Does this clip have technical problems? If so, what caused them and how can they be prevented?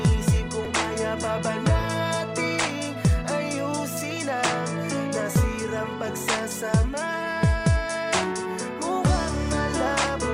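Yes. At 0.65 s there is a brief glitch from damaged data in a compressed stream: corrupted bytes made the decoder misread a frame and lose sync, unlike a plain dropout, which is silent. Verified checksums and retransmission prevent it.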